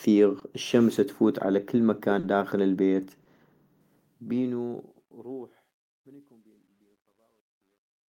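Packets from the call failed to reach the decoder in time at 0.39, 2.19 and 3.23 s, a short concealed packet loss each time. The receiver papered over each gap by extending the preceding sound for about 20 ms, then about 40 ms, then about 20 ms, before crossfading back to real audio. The result is a brief smear or wobble. The longest one falls right after "الشمس تفوت على كل" and just before "داخل البيت", and the last comes straight after "داخل البيت".

From 3.81 s to the end, the stage handling the volume keeps only about 11 bits and adds no dither, which causes truncation distortion on a fade. As the level drops toward the smallest step, the waveform collapses into coarse staircase steps. The tail grows gritty, and it is worst from 5.5 s.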